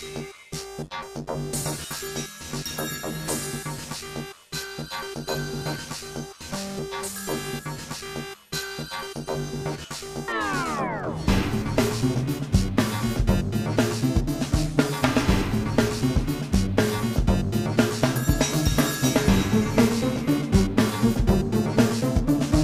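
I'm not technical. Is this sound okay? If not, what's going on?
Yes, this sound is okay. Nothing in it needs fixing.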